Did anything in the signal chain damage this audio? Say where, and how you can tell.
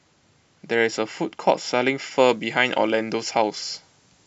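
Yes. From 2.29 s to the end at 4.27 s the speech turns thin, bright and sibilant: pre-emphasis left on. The treble sits about 8 dB high at 10 kHz relative to 1 kHz, matching the CD 50/15 µs curve, so the playback stage never applied the matching de-emphasis cut.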